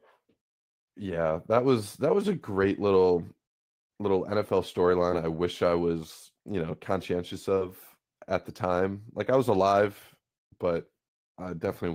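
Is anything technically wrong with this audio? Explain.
Yes. There is short concealed packet loss at three points. The first is at 5.11 to 5.14 s. Then two drops come back to back, 7.54 to 7.59 s and 7.59 to 7.63 s. Each gap is about 20 ms of missing audio, which fits 20 ms packets arriving too late to decode. The receiver covers each gap by extending the last sound, then crossfades back into the real signal. You hear a brief smear or wobble at 5.1 s, and a longer wobble around 7.6 s.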